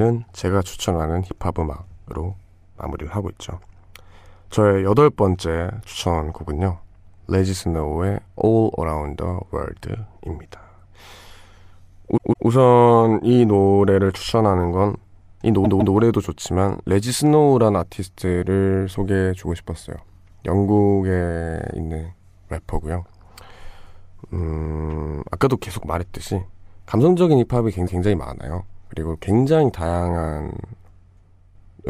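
At 12.16 s and 15.64 s, the same 157 ms slice of speech plays twice more, and at 27.86 s once more. These are repeated frames, which fits a run of six compressed frames being resent. Unlike echo, each copy replays whole and in sequence, with added time.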